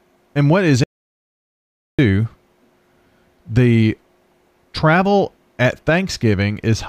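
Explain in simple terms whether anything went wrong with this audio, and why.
Something did go wrong: an audio dropout to silence. Just after "and what is", at 0.84 s, the speech cuts out completely and nothing comes back until 1.99 s, a gap of about 1.15 seconds. The gap is dead silent, with no background hiss or room sound, so the recording kept running while receiving nothing. The likely cause is a brief loss of input, such as a loose connection or an accidental mute. Whatever was said then is lost.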